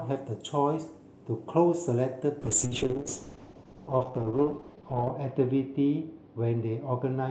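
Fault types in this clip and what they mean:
Call bitrate drop, 2.42 s to the end: the call's bandwidth estimate collapses and the Opus encoder must work with far fewer bits. The speech turns coarse and muffled as the highs vanish, which fits a fall from 32 to 7 kbps, bottoming out for 2.69 s.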